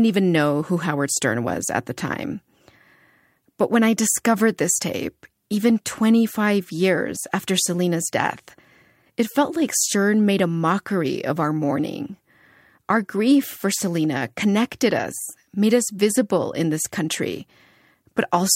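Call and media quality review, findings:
No faults found in the speech signal; level, continuity and timing stay steady across the whole clip, with nothing in it that calls for a ticket.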